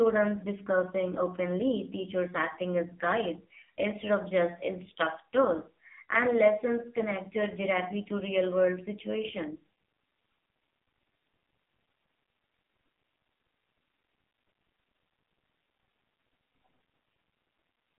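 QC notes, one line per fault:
Throughout: AMR narrowband mobile codec. The speech has been squeezed into a low-rate mobile speech coder. The sound points to AMR-NB at around 5.9 kbps, and the damage is heavy. Energy sits in a band of roughly 250 Hz to 3.5 kHz with nothing above 3.5 kHz, which leaves the voice thin and muffled. At this bit rate the coder can place only a few excitation pulses per frame to drive its vocal-tract model, so voiced sounds come out buzzy and synthetic.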